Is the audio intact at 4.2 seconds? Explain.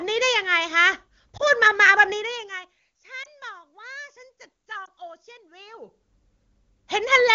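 Yes, the audio is intact at 4.2 seconds, with no audible fault at that moment.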